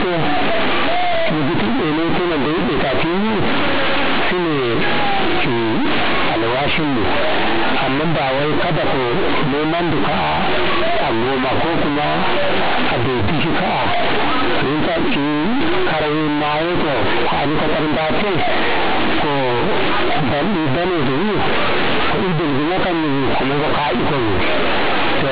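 From the first second to the end, the speech is marred by companded audio read as linear: mu-law bytes from the G.711 telephone path are being played as plain 8-bit samples without expansion. Every sign change throws the output across roughly half its range, so quiet passages come out as large as loud ones and the waveform is badly bent. The result is very loud, buzzy distortion, with heavy noise filling the pauses.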